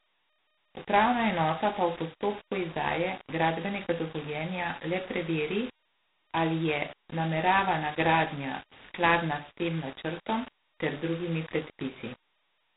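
Speech runs the whole 13 seconds with a coarse, grainy distortion that tracks the level. Quiet stretches turn gritty and the softest bits sputter. That's likely low bit depth without dither: rounding to something like 6 bits leaves error that follows the signal, roughly 20 dB down. On top of that sits G.726 ADPCM damage. Nothing gets through above 3.9 kHz, and a harsh, rasping hiss rides the speech level, which fits the lowest 16 kbit/s mode, where only a couple of bits per sample code each difference from the prediction.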